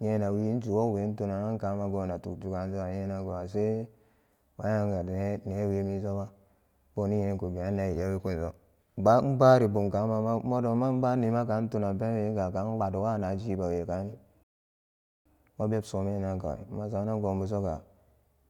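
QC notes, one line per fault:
14.43–15.26 s, rebuffering stall: the speech drops to silence for 0.82 s, then resumes exactly where it stopped, as playback waited for more downloaded audio.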